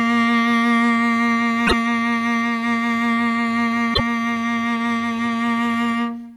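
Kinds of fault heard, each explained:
Damaged data in a compressed stream: twice in this music, from 1.63 to 1.73 s and again from 3.91 to 4.00 s, a burst of about 0.1 s breaks up the music. Corrupted bytes in the encoded stream cause the decoder to misread the frames at those points, lose frame sync and hunt for the next valid header before it can resume normal playback.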